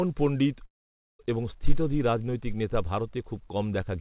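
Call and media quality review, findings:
Long network dropout, 0.66–1.21 s, right before "এবং স্থিতধী রাজনৈতিক নেতা". The last sound smears into a fading buzz, then about half a second of near-silence. Roughly 0.54 s of audio is never recovered. Likely packets lost and the receiver concealing, then giving up. Band stops at 4 kHz, which fits the G.711 call path.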